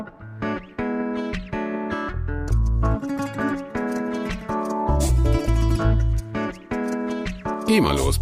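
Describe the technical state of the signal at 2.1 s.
At 2.1 s the audio is intact, with no audible fault at that moment.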